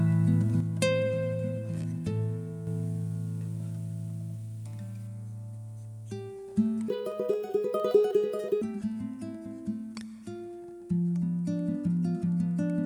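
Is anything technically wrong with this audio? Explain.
Yes, two faults.

Sudden gain jump, 0.60 to 2.67 s: the level drops by about 6 dB, with the sound and its background noise falling together and then returning. The change is instant with no fade, likely from a gain setting applied without a ramp.

Section at the wrong speed, 6.88 to 8.62 s: the audio runs 1.9 times too fast, so it sounds hurried and shifted up by roughly ten semitones, then snaps back. This is likely from the passage being played against the wrong clock.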